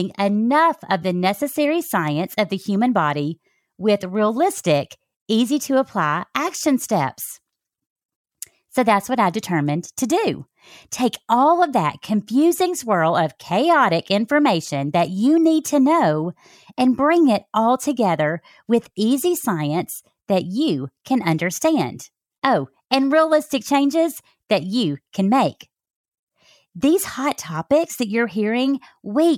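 No audible technical faults.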